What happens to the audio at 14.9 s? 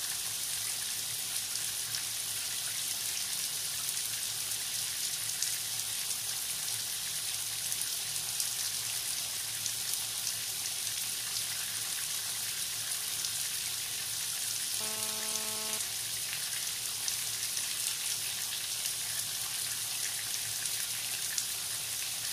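At 14.9 s you're inside a burst of GSM phone buzz running from about 14.81 to 15.78 s. A nearby 2G phone was transmitting, and the audio circuitry rectified its radio pulses. That gives a steady, hard, raspy 217 Hz buzz full of harmonics, only about 9 dB below the sound.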